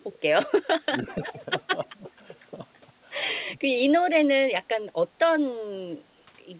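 Speech suppressed in double talk affects this speech recording at 0.8 to 1.07 s, 1.99 to 2.07 s, 4.47 to 4.8 s, 5.08 to 5.13 s and 5.29 to 5.34 s. The voice briefly sinks, by up to about 15 dB in the deeper dips and only a few decibels in the shallow ones. The likely cause is an echo canceller that heard both ends talking at once, could not separate its own talker from the loudspeaker echo, and turned everything down. An echo leak follows from 0.98 to 1.26 s: a faint copy of the voice, about 20 dB below it, arrives 292 ms late. This is likely loudspeaker sound that the far end's canceller failed to remove and sent back. The band limit at 4 kHz, which fits G.711 A-law at 64 kbps, belongs to the call path itself.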